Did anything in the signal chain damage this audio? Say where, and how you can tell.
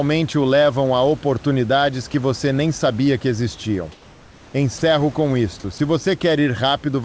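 Yes. In call processing, discontinuous transmission likely stopped after "nem sabia que existiam": from 3.92 to 4.54 s, comfort noise replaces the background, steadier and about 3 dB quieter.

The voice detector likely mistook sound for background just before "com isto", dropping 40 ms from 4.78 to 4.82 s and filling it with comfort noise.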